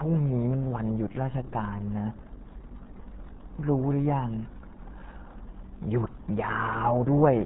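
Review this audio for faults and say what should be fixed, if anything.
The whole recording carries heavy RealAudio 14.4 codec damage. Nothing passes above 3.8 kHz. The speech sounds muffled and gargly throughout. The codec crushes sound into a tiny data stream, which fits an 8 kbit/s dial-up rate. To prevent it, return to the original source and encode with a modern codec at a higher bitrate.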